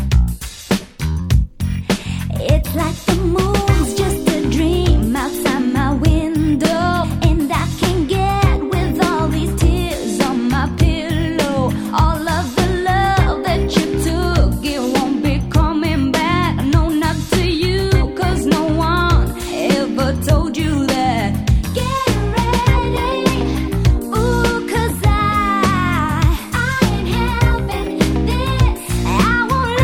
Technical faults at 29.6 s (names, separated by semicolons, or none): none